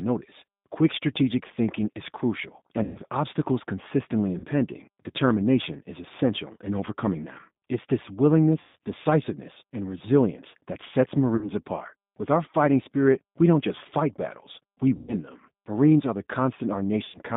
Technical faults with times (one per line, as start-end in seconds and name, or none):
0.00-17.37 G.729 codec
2.83-2.98 VoIP packet loss concealed by the speech codec
4.38-4.46 VoIP packet loss concealed by the speech codec
8.61-8.77 VoIP packet loss concealed by the speech codec
11.36-11.52 VoIP packet loss concealed by the speech codec
14.96-15.14 VoIP packet loss concealed by the speech codec
17.05-17.19 VoIP packet loss concealed by the speech codec